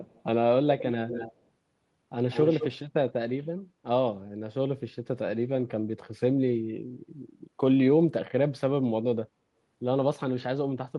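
An echo leak appears at 0.05 to 0.22 s, 0.78 to 0.89 s, 1.08 to 1.35 s and 2.31 to 2.69 s. A delayed copy of the speech returns. It starts faint, about 280 ms late, then arrives 185 ms late and grows until it is nearly as loud as the speech. Likely cause: a loudspeaker echo that the far end's canceller failed to remove.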